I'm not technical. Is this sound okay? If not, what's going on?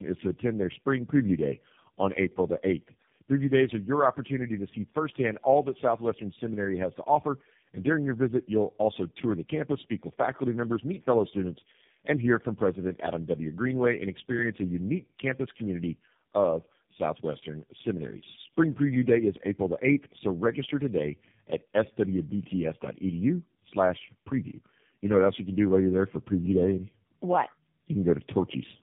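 No. Throughout the speech you hear tandem speech coding. The call passed through three different phone-network speech compressors in a row, each re-squeezing the last one's damaged output. A single poor phone line sounds thin. This sounds rough, muffled and warbly together, with nothing above 3.6 kHz.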